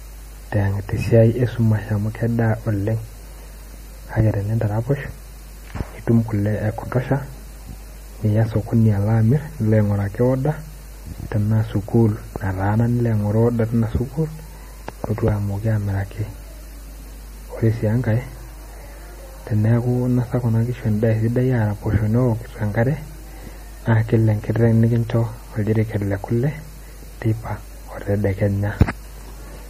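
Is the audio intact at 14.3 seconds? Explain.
No. At 14.3 s, as across the whole clip, there's steady mains hum, a low 50 Hz tone from power-line coupling sitting roughly 20 dB under the speech. The speech also sounds watery and smeared, with nothing above 15.2 kHz, likely from MP3 compression starved of bits, which fits a low bitrate around 40 kbps.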